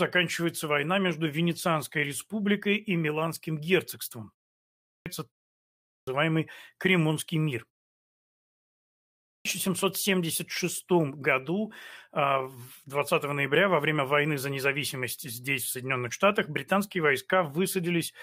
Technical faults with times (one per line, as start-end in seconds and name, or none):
4.59-5.06 clipped start after a pause
5.58-6.07 clipped start after a pause
9.03-9.45 clipped start after a pause